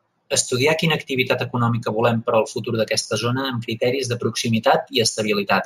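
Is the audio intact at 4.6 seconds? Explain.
No. At 4.6 seconds the speech carries imaging from linear upsampling, present throughout the clip. Straight-line interpolation, which fits a 16 kHz source raised to 44.1 kHz, filters weakly. The top is dulled, and a mirrored image sits between 8 and 16 kHz, roughly 20 dB down, adding faint metallic shimmer to sibilants.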